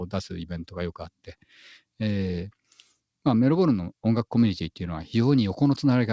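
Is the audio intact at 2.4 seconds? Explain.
Yes, the audio is intact at 2.4 seconds, carried through the WebRTC call path with its usual wideband coding and nothing above 8 kHz.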